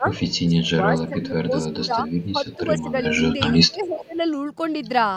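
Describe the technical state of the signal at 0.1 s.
At 0.1 s the speech is caught in speech suppressed in double talk, from 0.0 to 0.13 s: it dips by roughly 10 dB rather than cutting out completely, likely because an echo canceller turned down both overlapping talkers.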